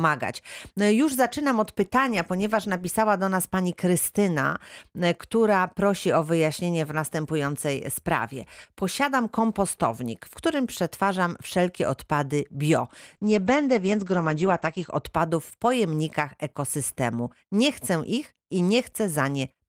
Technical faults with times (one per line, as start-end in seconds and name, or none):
13.16-15.09 call bitrate drop